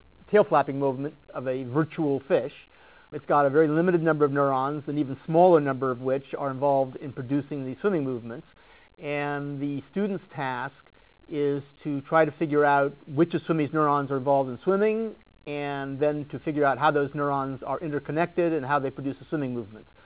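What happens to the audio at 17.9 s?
Nothing goes wrong at 17.9 s: the audio runs on intact through the call path, still band-limited to nothing above 4 kHz as the G.711 mu-law coding leaves it, with no dropout, glitch or distortion at that moment.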